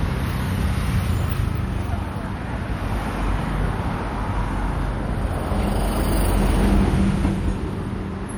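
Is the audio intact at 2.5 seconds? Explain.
No. At 2.5 seconds the sound carries plainly audible damage that is likely from MP3 compression, present from start to finish rather than at that moment alone. The damage fits a low bitrate around 64 kbps. The encoder has too few bits, so it cuts the treble at a fixed frequency and zeroes weak frequency lines that flicker on and off between frames. The result is a dull, watery, swirling texture with smeared attacks.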